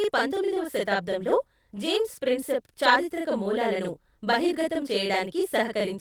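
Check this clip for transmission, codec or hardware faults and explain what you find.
Two faults are present: a channel delay that doubles the speech throughout, and one lost packet rebuilt from error correction.

The channel delay (doubling) runs the length of the clip. One channel arrives about 40 ms behind the other, and when the two are summed to mono, the late copy sits at the same level as the original. At this spacing it doesn't blend into a comb-filter colouration. Each syllable is heard twice in quick succession, giving a slapback or doubled-voice effect over the whole clip.

The lost packet rebuilt from error correction occurs at 1.35 s, lasting 20 ms, between "పంతొమ్మిదవ శతాబ్దంలో" and "జేమ్స్ ప్రిన్సెప్ చారిత్రక మూలాలను". This fits a single lost packet. The following packet carried a low-bitrate redundant copy, and the decoder played that copy instead of leaving a gap. There is no dropout. 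The speech briefly turns coarser and noisier for that one frame, then returns to full quality.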